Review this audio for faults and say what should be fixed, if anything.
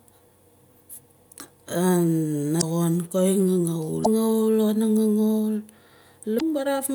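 Three short glitches break through the speech, at 2.58–2.63 s, 4.01–4.07 s and 6.36–6.42 s, each about 55 ms long. This is damaged data in a compressed stream: corrupted bytes made the decoder misread those frames and lose sync until it found the next valid frame header. Prevent it by carrying the stream over a checked, error-protected path, or by verifying the file's integrity before decoding.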